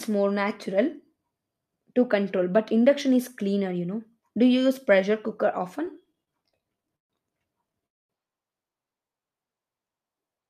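From 5.85 to 7.12 s, right after "you use pressure cooker", the speech breaks into repeated stalls (stutter). Packets arrived late or too slowly, so the jitter buffer kept running dry, about 17 times. Each time the receiver stretched the last sound to cover the wait, adding 321 ms in all, a quarter of that span. The longest wait was 134 ms. Nothing is lost, but the speech drags and hiccups. A spectrogram shows short smeared, flat-topped stretches repeating through the section, and the waveform shows held or fading segments between normal ones.

At 7.86 s a call audio freeze sets in and lasts until 8.12 s. The likely cause is packets held up in transit that emptied the buffer. The receiver filled about 232 ms, nearly all of it, 230 ms, as silence, so the speech stops dead and then resumes where it left off. This pushes the playout delay later by 232 ms. The waveform shows a flat gap, and the spectrogram shows a blank vertical band.

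From 9.08 to 9.32 s a jitter buffer slow-down adds 42 ms. The receiver repeated single pitch periods to rebuild its reserve, so the speech plays at about 86% speed while its pitch stays the same. Sounds are drawn out. On a spectrogram the harmonics keep their spacing but stretch horizontally, and the waveform shows near-identical cycles repeated back to back.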